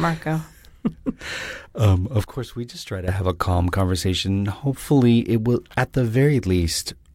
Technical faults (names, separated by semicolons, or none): sudden gain jump